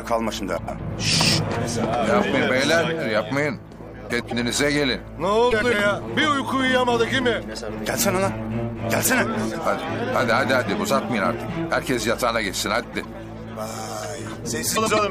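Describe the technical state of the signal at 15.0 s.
Frames out of order affect the audio from 14.75 to 14.99 s: two adjacent runs of four frames, each 104.5 ms, were decoded in swapped order. The stretch plays with its halves exchanged, giving a garbled flutter, and no time lost.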